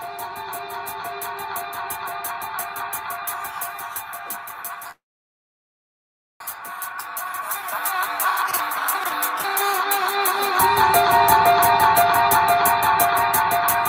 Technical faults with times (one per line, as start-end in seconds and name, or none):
4.91-6.42 call audio freeze